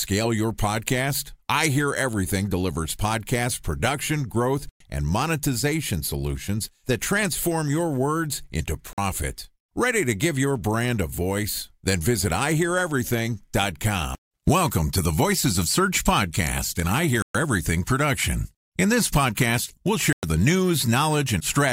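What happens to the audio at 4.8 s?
A Bluetooth stall runs from 4.69 to 4.81 s: the speech drops to silence for about 110 ms, then resumes. The likely cause is radio interference delaying packets until the headphones' buffer emptied, so playback halted until the resent data arrived.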